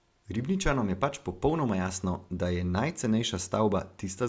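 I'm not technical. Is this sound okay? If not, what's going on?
Yes, this one's fine: there's nothing wrong to hear anywhere in the recording, so you can relax about it.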